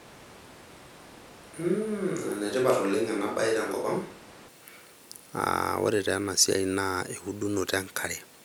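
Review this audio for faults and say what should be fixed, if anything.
From the start to 4.48 s the close microphone's signal was likely lost, forcing a switch to a distant microphone. The speech turns roomy and hollow, thin in the bass, roughly 5 dB quieter, with room noise only about 20 dB below it, until the close sound returns abruptly at 4.48 s. Monitoring the close mic during recording and keeping a backup track of it would prevent this.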